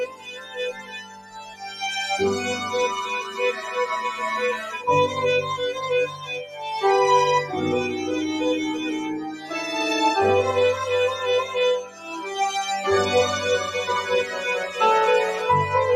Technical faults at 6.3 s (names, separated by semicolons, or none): noise suppressor applied to music or sounds; sound cut by the noise suppressor